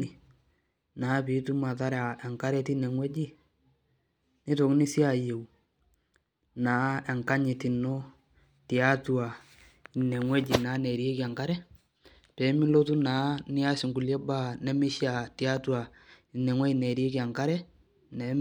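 A speech recording with nothing technically wrong with it, so there are no times or causes to report.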